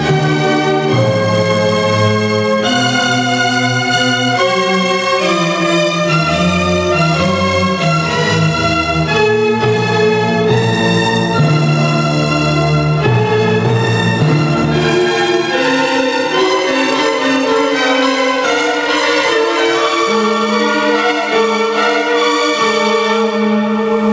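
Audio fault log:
Throughout: gain pumping. The level swings by roughly 10 dB, which leaves the dynamics squashed. Likely cause: gain set far too high, with a fast limiter pulling it down on every peak. Nothing is heard above 8 kHz, consistent with a G.722 call path.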